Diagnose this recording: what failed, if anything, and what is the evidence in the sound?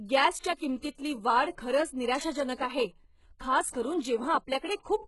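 HE-AAC compression runs through the whole speech clip, at the codec stage. Nothing is present above 11.5 kHz, and the treble that remains sounds synthetic and gritty. This is likely spectral band replication rebuilding the top from copied lower bands, with heavy damage that suggests a bitrate around 12 kbps.

Pre-echo appears at 0.55 to 0.60 s, just before "किंमतीतली वाढ खरंच", and at 3.70 to 3.74 s, right after "आहे खास". A short hiss of 49 ms and 38 ms precedes each attack. The transform codec spread quantisation noise across its block, ahead of the transient.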